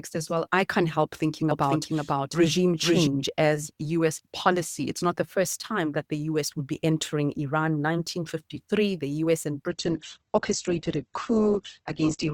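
From 1.51 s to 3.07 s, every sound arrives twice: a full-band second copy trails the first by roughly half a second at about the same loudness, with no decay or room colour, and it cuts in and drops out abruptly at both ends. This is a doubled audio track. The likely cause is the same signal being picked up a second time through a slower path, or an edit that left two copies overlapping out of step.

At 9.70 s, with no gap, the treble collapses. Nothing remains above about 8.2 kHz, and coding artefacts thicken through to the end of the clip. This is an adaptive stream at a lower bitrate. The player switched to a cheaper rendition when the connection slowed, and the sound fits a step down from around 64 kbit/s to about 12 kbit/s Opus.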